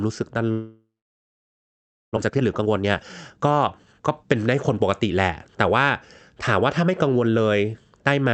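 From 0.51 to 2.19 s, the stream most likely suffered a long network dropout, with incoming audio stopping for well over a second. The receiver filled the gap by stretching the last received sound, heard as a buzzy, hissing tail that fades. About 1.25 s of that stretch is silence or a low steady bed of noise. When sound returns, roughly a second of the original is simply gone, and the stream has picked up around 0.7 s of extra delay.

From 2.22 to 4.24 s, a jitter buffer speed-up follows. The late audio arrived in a burst, so the buffer held far more than its target and the receiver trimmed it back by repeatedly cutting out tiny pitch-period slices, removing roughly 0.7 s in total. The speech plays at about 131% of normal speed while keeping its pitch, so it sounds rushed. All of this passes through an Opus call path that limits the audio to about 8 kHz.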